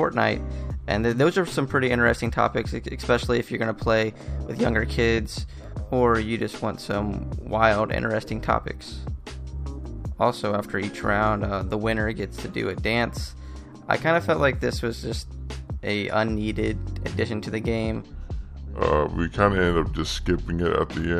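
From 18.02 s to the end at 21.19 s, a section at the wrong speed plays at about 0.75 times normal, dropping the pitch roughly five semitones so the sound turns deep and sluggish, likely from a clock mismatch. A spectrogram shows every band shifted downward and stretched in time; the waveform's cycles widen.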